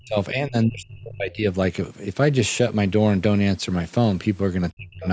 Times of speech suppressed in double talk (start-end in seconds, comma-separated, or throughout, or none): 0.00-1.46, 4.71-5.07